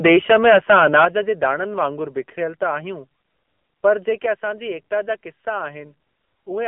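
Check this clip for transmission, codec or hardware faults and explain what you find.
One fault runs through the whole speech clip: AMR narrowband mobile codec damage. The audio sits in a telephone band of roughly 200 Hz to 3.4 kHz, with nothing above 3.4 kHz. The codec rebuilds the voice from a vocal-tract model excited by sparse pulses, and the clearly audible buzzy, synthetic edge fits a low AMR-NB mode of around 7.4 kbps. That buzz sets it apart from a simple telephone-band filter, which dulls the sound without making it sound artificial.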